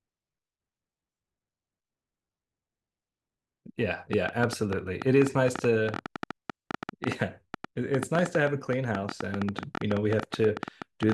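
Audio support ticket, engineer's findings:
Train of clicks, 4.13 s to 11.13 s: uniform pulses, about 9 per second, irregularly spaced, well above speech level. Likely nearby-equipment interference or a faulty connection.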